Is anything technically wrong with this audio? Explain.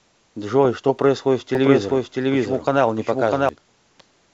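Yes. From 1.55 s to 3.49 s there is a doubled audio track: a second copy of the speech runs roughly 0.7 s behind the first, at about the same level. The likely cause is a slower capture path recording the sound again, or an edit leaving two copies out of step. The echo is dry and full-band and starts and stops abruptly. On a spectrogram the speech pattern repeats, shifted right; the waveform shows overlapping, duplicated envelopes.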